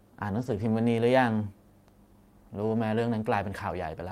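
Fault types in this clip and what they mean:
Lost packet rebuilt from error correction: from 0.37 to 0.63 s the speech turns rougher and noisier without a gap, as lost packets are replayed from low-bitrate copies sent in later packets.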